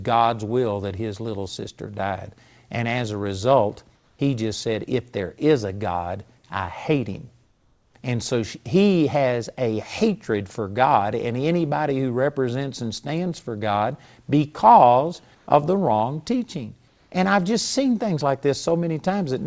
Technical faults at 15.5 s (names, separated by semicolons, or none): comfort noise in place of the background